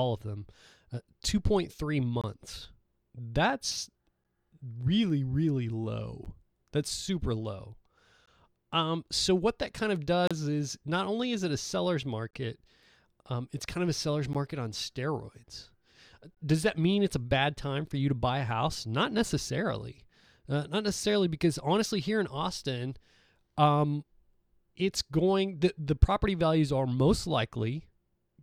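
Gaps between stream segments hit the speech every 2 s, at 2.21, 4.24, 6.25, 8.26 (just after "super low"), 10.27, 12.31, 14.33 and 16.35 s. The segment timestamps leave holes of 9 to 32 ms that playback fills with silence, so nothing is lost. Each one sounds like a brief hard dropout. On a waveform it shows as a flat silent stretch with abrupt edges, and on a spectrogram as a thin, fully blank vertical stripe.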